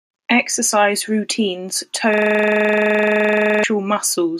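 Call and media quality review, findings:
System hang loop, 2.14–3.64 s: driver or host froze while the output ring buffer kept cycling. One 42.67 ms slice, which fits a 2048-sample buffer, repeats about 35 times, giving a 23.4 Hz machine-gun stutter.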